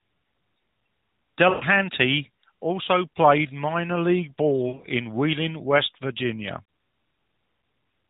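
At 1.50 to 1.64 s, lost AMR speech frames: about 120 ms fails its checks, so the decoder repeats the last good pitch and vocal tract settings with falling gain. The sound smears into a fading buzz, with flat, stretched harmonics on a spectrogram and a shrinking waveform envelope. After "also played minor league", 4.68 to 4.87 s brings similar losses scattered across 160 ms, runs up to 60 ms, heard as choppy warbling dips.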